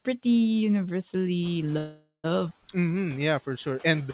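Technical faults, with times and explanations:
1.42–1.59 s, noise suppressor catching up: the room noise jumps by about 15 dB near 1.5 s, and the suppressor's noise estimate lags. For about 170 ms the noise passes with less reduction, then drops by about 5 dB as the estimate adapts.
1.78–2.26 s, call audio freeze: the last sound is drawn out as a fading buzz or hiss, including about 110 ms of silence. Audio then resumes where it stopped, so 457 ms is inserted and nothing is lost. The likely cause is delayed packets emptying the jitter buffer.
2.50–2.52 s, skip ahead: playback jumps forward with only a 7 ms join, and roughly a fifth of a second of audio is missing. A stretch of sound was dropped while later audio was already waiting, so the two sides butt almost directly together.
2.75–4.08 s, jitter buffer slow-down: to rebuild its reserve, the receiver repeats single pitch periods and bits of pauses many times over. 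This adds 127 ms, so the audio runs at 91% speed with unchanged pitch, with stretched sounds, all band-limited below 4 kHz.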